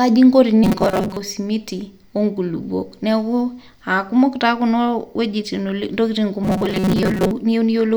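From 0.64 to 1.17 s, and again from 6.44 to 7.31 s, the speech turns into a rigid metallic buzz near 188 Hz, a robotic sound from repeated short buffers. Audio likely arrived too seldom, so a roughly 5 ms snippet was looped, replacing about half the first stretch and most of the second.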